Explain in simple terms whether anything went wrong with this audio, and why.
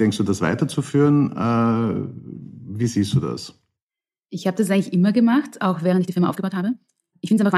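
Something went wrong near the end. From 5.88 s to the end, the speech suddenly runs about 1.76 times faster, but the pitch stays the same. It sounds rushed. This is a time-stretched section, likely squeezed by software that cut out tiny pieces to fit a shorter length.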